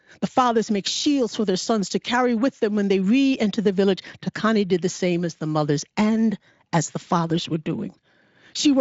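The speech comes through a Speex path whose content stops near 7.7 kHz, consistent with a high-quality wideband setting, and no technical fault can be heard in the recording.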